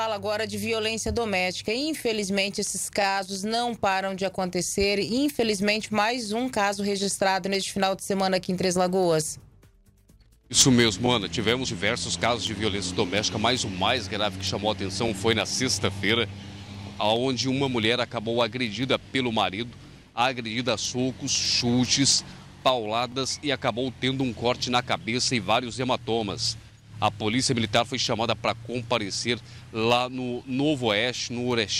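The audio has overlapping chunks. A brief stutter or click is heard at 3.02, 7.04, 15.08, 23.12 and 27.14 seconds. At each one, a 20 ms slice of sound plays twice. The events fall on a 4-second grid. This points to processing in 4-second blocks, where each new block begins 20 ms before the previous one ended. The repeated slice at every join produces the regular hiccup.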